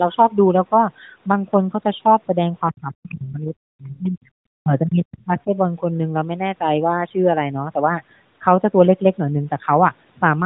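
A narrowband mobile speech recording, band-limited to the AMR range with only light codec coloration, in which the talker's level collapses twice, from 2.71 to 4.19 s and from 4.6 to 5.51 s. At the deepest point it drops by something like 40 dB, chopping the voice into dipped and missing pieces. This is speech suppressed in double talk, most likely an echo canceller turning down its own talker while the far side was also speaking. Unlike packet loss or codec dropouts, the gaps are not clean, fixed-length holes. They are level drops spread across most of a second or more. Inside those same stretches, brief scraps of the other side's voice leaking through appear at 3.10 to 3.14 s and 5.20 to 5.24 s, sitting well below the talker, weaker in the second. They are likely loudspeaker echo the canceller failed to remove. A room reflection would repeat the talker, but these scraps are a separate voice.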